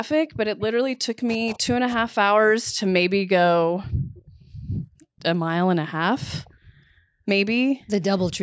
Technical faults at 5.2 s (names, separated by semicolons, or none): echo leak